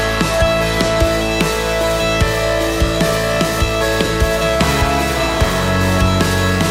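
From 0.96 s to the end of the clip, the converter's sample clock is being shaken by periodic interference at around 3 kHz. This is periodic clock jitter: each sample is taken a little early or late in a regular rhythm, so every component of the audio picks up sidebands about 3 kHz above and below it. The higher components are hit hardest. The result is a rough, metallic edge riding on the sound that disappears whenever the audio falls silent.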